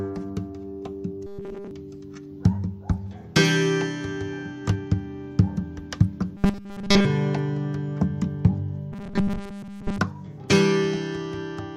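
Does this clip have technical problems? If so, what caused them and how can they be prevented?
Yes. Robotic sound from repeated short buffers occurs at 1.27–1.71 s, 6.37–7.05 s and 8.92–9.98 s. It is a rigid 200 Hz buzz, consistent with a 5 ms block being replayed, most likely because audio arrived too late to fill the output. Enlarging the jitter buffer or fixing the delivery stall should prevent it.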